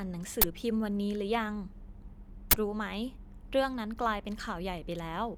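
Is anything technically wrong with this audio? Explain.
Yes. An uninitialised buffer appears twice in this speech, at 0.42 to 0.44 s and again at 2.51 to 2.53 s. Each time a block went out before any audio had been written into it, so stale memory contents played as samples. Both bursts last about 21 ms, which fits a 1024-sample buffer, and they cut in as short, loud blasts of harsh digital noise.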